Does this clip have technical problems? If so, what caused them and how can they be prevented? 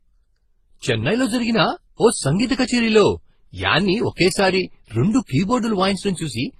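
Yes. The speech has different codec artefacts heard together throughout, with nothing above 12.8 kHz, likely from transcoding between lossy codecs, roughly a low-bitrate MP3-to-Opus-to-HE-AAC chain stacking artefacts. To prevent it, encode once from the original source.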